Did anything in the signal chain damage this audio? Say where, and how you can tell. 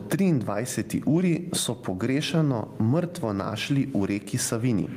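Yes. Gain pumping runs through the whole speech clip, with the gain swinging by around 15 dB; the room noise sits about 44 dB below the speech. The likely cause is input gain set far too high, with a fast limiter clamping every peak.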